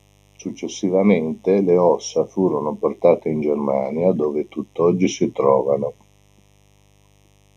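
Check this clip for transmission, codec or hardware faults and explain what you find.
Two hardware-side faults run through the whole speech recording.

Mains buzz, present from start to finish: a dimmer, rectifier or poorly shielded cable is letting switching spikes from the 50 Hz supply into the signal path, twice per cycle. Those sharp spikes carry a long train of 50 Hz harmonics reaching well into the kilohertz range, so the result is a steady, raspy buzz rather than a soft hum. It sits around 35 dB below the speech.

Channel delay (comb filtering), also throughout: one channel arrives a fraction of a millisecond late, around a third of a millisecond, and the two channels are then summed to mono. Whatever is common to both cancels wherever the delay puts them in opposite phase, giving a first notch near 1.5 kHz and further notches at evenly spaced intervals above it. Those fixed gaps in the presence region make the speech sound hollow and phasey.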